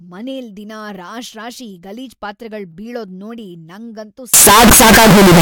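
From 4.34 s to 5.41 s, right after "ಬೀಳೋದ್ ನೋಡಿ ನಂಗಂತೂ", the speech turns into loud, harsh distortion with no quiet gaps. This is likely signed and unsigned mixed up on 16-bit samples: the flipped top bit throws each zero crossing across the full range.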